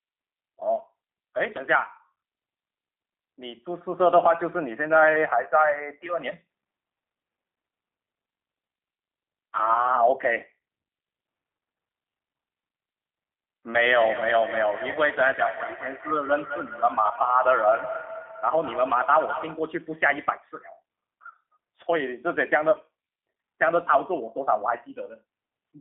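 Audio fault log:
throughout  G.729 codec: rough, slightly synthetic speech confined to about 200 Hz to 3.5 kHz, because an 8 kbit/s coder rebuilds it from a vocal-tract filter and pitch pulses.
14.92–14.99 s and 22.71–22.78 s  VoIP packet loss concealed by the speech codec: brief buzzy or noisy, fading smears where the decoder extended its last pitch across about 30 ms of missing audio, consistent with one lost packet each time.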